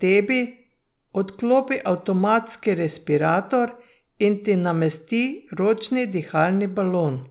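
Nothing here needs flagging; the speech comes over an ordinary call path using G.711 mu-law at 64 kbps, so there's nothing above 4 kHz, which is simply how that narrowband codec sounds.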